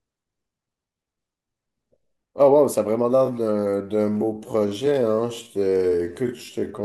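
From 3.13 s to the end, a time-stretched section slows the speech to about 0.59 times its pace, likely from software repeating short pieces to fill a length. It sounds dragging, yet pitch stays unchanged, unlike slowed playback, which would drop it.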